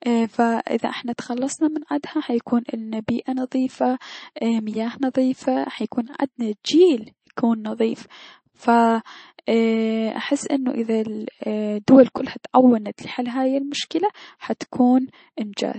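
From start to finish the speech carries the watery, swirly texture of MP3 compression, and it's plainly audible. There's nothing above 8.3 kHz, so the top end sounds sealed off, and the s sounds get that metallic chirp. That's the encoder running short of bits, dropping the treble at a fixed cut-off and switching weak frequency lines on and off between frames. It likely comes from a low bitrate, the damage fitting something around 36 kbps.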